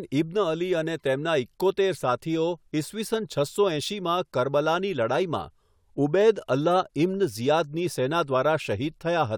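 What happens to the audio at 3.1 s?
Nothing goes wrong at 3.1 s; the speech continues intact through that moment.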